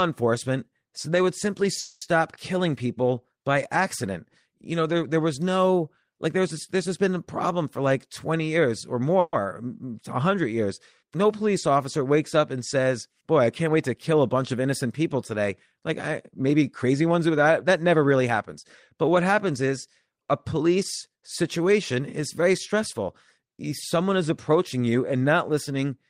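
A call audio freeze at 1.79 to 2.03 s, after "so they would simply", fills about 220 ms with a fading buzz or hiss before the speech resumes on "killing people by accident" with nothing lost. The jitter buffer likely ran dry while packets were delayed, so the receiver stretched the last sound into a gap.

A jitter buffer speed-up runs from 7.49 to 9.17 s, after "this has been a". The speech plays at 108% of normal speed with the pitch unchanged, sounding hurried, as the receiver cuts short pitch-period slices totalling around 150 ms to drain excess buffered audio.

A second freeze at 9.20 to 9.35 s holds a fading continuation for about 130 ms, ending in roughly 20 ms of silence. Again nothing is missing, and packets were likely held up on the way.

A second speed-up from 16.31 to 18.65 s runs at 109% and trims around 200 ms in small pieces.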